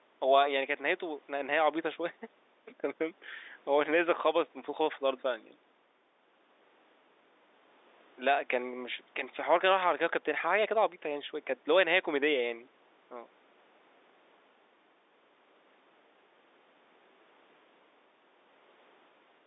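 No faults: the speech sits in the ordinary 300 Hz to 3.7 kHz telephone band expected of G.711 mu-law coding after call microphone processing.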